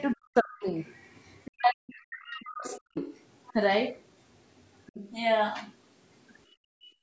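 From 0.00 to 0.14 s, a faint second voice sits under the speech, roughly 30 dB down. This is the other side's voice leaking through. The likely cause is loudspeaker echo that the echo canceller did not fully remove. From 0.14 to 0.66 s, the talker's speech sinks sharply, by as much as 40 dB or so, and breaks into pieces. This is speech suppressed in double talk. Both sides were likely talking at once, and the canceller turned everything down. From 0.61 to 1.51 s, the far voice leaks through again, quiet, about 30 dB under the speech. Its likely source is the same uncancelled echo. From 1.52 to 2.97 s, a longer double-talk suppression follows. For about a second and a half, the speech dips, dulls and drops out in places, down by up to 40 dB or so, likely because the canceller clamped down on both voices. Inside that stretch, at 2.30 to 2.37 s, a short scrap of echo slips through, about 25 dB down. 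From 2.75 to 3.53 s, the leak grows louder, only about 20 dB under the speech. From 4.58 to 5.11 s, it returns at about 25 dB down. These echoes likely come from residual loudspeaker sound. From 6.51 s to the end, the room background falls away by about 35 dB. This is background gated by the echo canceller. It suppressed the microphone hard while the loudspeaker played.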